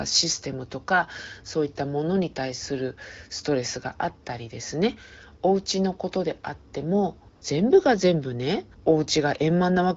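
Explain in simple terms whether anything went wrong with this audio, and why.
Around 7.35 to 7.41 seconds the phone briefly decided the talker had gone quiet and stopped sending real speech for about 60 milliseconds. This is AMR comfort noise: during that gap the receiving end made up a smooth, even hiss to stand in for the room's actual background. You hear a short patch where the natural background is swapped for that artificial noise. The HD Voice call itself carries the speech with only light coding damage.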